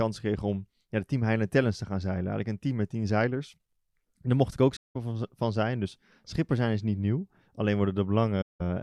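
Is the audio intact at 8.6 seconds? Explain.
No, 8.6 s falls right at the tail of a gap in this speech clip. From about 8.41 to 8.61 s there's AAC frame loss with muting: a run of coded frames never reached the decoder, and it filled them with a zeroed spectrum. The overlapping windows fade the sound down into that roughly 0.2 s silence and back up out of it, a length that fits around nine lost frames. It's a soft-edged hole.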